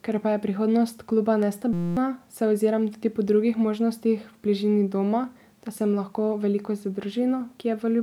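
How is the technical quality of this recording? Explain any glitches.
There's one clear glitch, a system hang loop, just after "pa je prihodnost kluba" and before "se oziram", from 1.73 to 1.97 s. The machine or its audio driver briefly froze while the sound card kept replaying the same tiny stretch of its buffer, about 5.8 ms long, which fits a 256-sample buffer. That slice repeats 41 times at 172 Hz, so you hear a steady buzzy tone instead of speech, and roughly a fifth of a second of real audio is lost.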